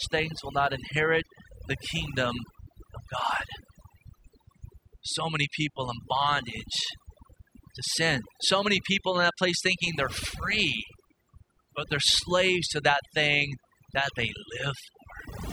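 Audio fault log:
Throughout: overdone noise removal. Aggressive noise reduction gates bands near the noise estimate, leaving near-silent gaps with twinkling specks and quiet parts of the speech removed.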